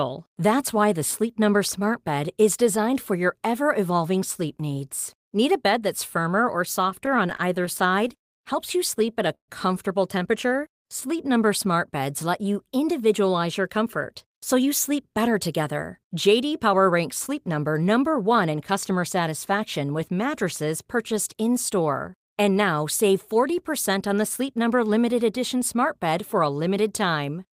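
A speech clip with three kinds of network playout fault. Repeated stalls (stutter) come first, from 6.81 to 8.27 s, right after "firmer or", and again from 8.99 to 9.50 s. The first burst has 13 short hitches, the longest 85 ms. The second has 4, the longest 134 ms. Packets arrived late, so the jitter buffer kept running dry. The receiver stretched the last sound to cover each gap. Nothing is lost, but the speech drags and stumbles. Next comes a jitter buffer slow-down, from 10.47 to 12.69 s, just before "individualize your comfort so". The voice plays at 94% speed with its pitch unchanged. Repeated pitch periods add 144 ms to rebuild the buffer's reserve. Finally, a jitter buffer speed-up runs from 14.53 to 19.51 s, between "individualize your comfort so" and "with mattresses purchased". Speech plays at 106% speed, still at the same pitch. The receiver trimmed about a third of a second in tiny pieces to cut excess delay, and the delivery sounds hurried.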